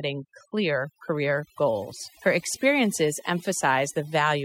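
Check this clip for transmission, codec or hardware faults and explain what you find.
Throughout the speech, the background drops and breaks up into twinkling specks. That is overdone noise removal: an over-aggressive noise reducer cut individual frequency bands sitting near its noise estimate, removing quiet speech detail along with the noise.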